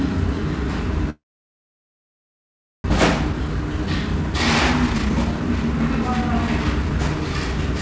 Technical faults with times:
1.10-2.92 long network dropout
3.16-7.59 jitter buffer speed-up

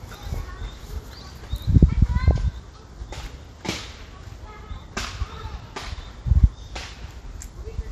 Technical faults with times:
0.00-7.92 MP2 compression
0.34-0.45 DAB burbling
2.20-2.38 DAB burbling
4.80-4.92 DAB burbling

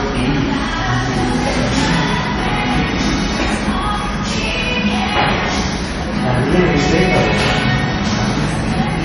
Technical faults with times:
0.00-9.04 MP3 compression

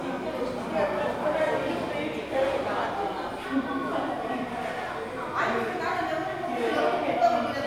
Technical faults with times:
none

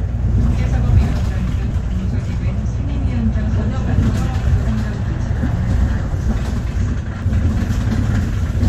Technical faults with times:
1.70 damaged data in a compressed stream
4.62 damaged data in a compressed stream
7.22 damaged data in a compressed stream

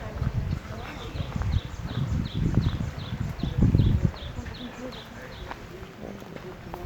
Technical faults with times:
none

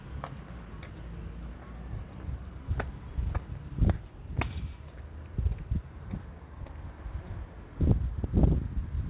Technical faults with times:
none

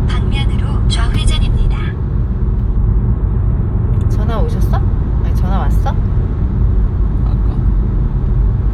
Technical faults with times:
2.76-4.10 channel delay (comb filtering)

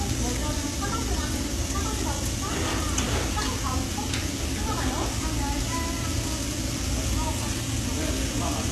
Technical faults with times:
0.00-8.71 HE-AAC compression

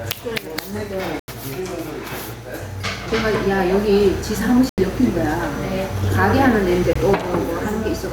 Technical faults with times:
0.00-8.13 gain pumping
1.19-1.28 block of digital silence
4.69-4.78 block of digital silence
6.93-6.95 block of digital silence

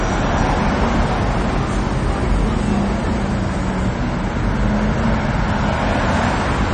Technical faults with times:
0.00-6.74 MP3 compression

